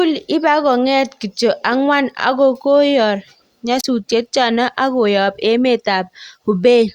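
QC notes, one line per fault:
3.78 to 3.84 s, wireless microphone squelch dropout: the radio link from an analogue FM microphone fades, hiss swells briefly, then the receiver's squelch mutes the output for about 33 ms before speech resumes at "chano ak koyap emet". The rising static before the gap separates it from a digital packet dropout, which cuts cleanly with no hiss.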